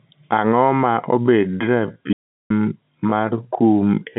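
A speech recording carried over a telephone line, with G.711 mu-law coding limiting the band to roughly 150 Hz to 3.6 kHz and nothing above 3.8 kHz. From 1.19 s to the end, a time-stretched section appears, likely from software lengthening the audio to fill a slot by repeating short slices while holding pitch. The speech runs at about 0.56 times its natural pace, so it drags suddenly without dropping in pitch. Inside that slowed stretch, from 2.13 s to 2.50 s, an audio dropout to silence cuts in, likely because the input link failed or was muted while writing continued. For about 374 ms the sound vanishes entirely, leaving silence with no room tone, and then the slowed speech resumes mid-flow, with whatever was said during the gap lost.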